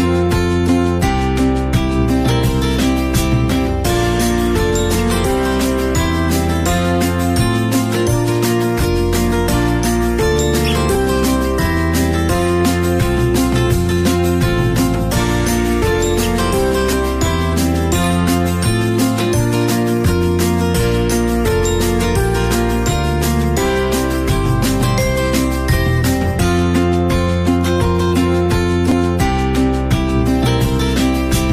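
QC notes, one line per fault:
10.95, 16.93 and 28.92 s: overlap between stream segments. Tiny skips where overlapping segment boundaries got trimmed, dropping a few milliseconds. The spacing fits 6-second segments.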